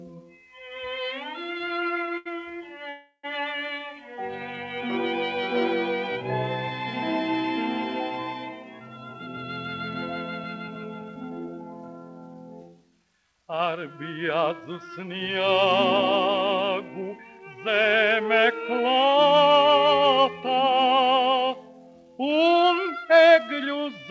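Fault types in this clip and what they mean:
Short stall from a late packet: at 2.17 to 2.27 s the last sound is held about 81 ms, then resumes without loss, shorter than a freeze.
Call audio freeze: from 2.89 to 3.25 s sound trails off into roughly 70 ms of silence, likely from held-up packets, then resumes exactly where it stopped.
Jitter buffer speed-up: four stretches between 8.80 and 20.95 s run about 6 to 7 percent fast at unchanged pitch, trimming audio rather than inserting gaps.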